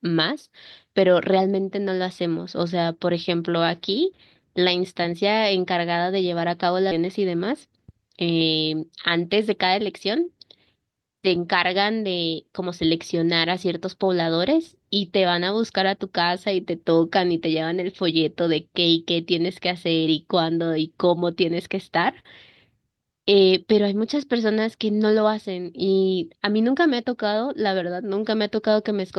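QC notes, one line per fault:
6.91–6.98 s, skip ahead: a stretch of audio, around 0.4 s, was dropped, and playback jumped to material already waiting. No gap was inserted, just a few milliseconds of smoothing, so the two sides butt together with an abrupt join.
7.52–7.93 s, jitter buffer speed-up: with the buffer still holding more than its target, the receiver cut short pitch-period slices in quick succession, about 50 ms in total. Playback runs at roughly 109% speed without a pitch change, so this stretch sounds hurried.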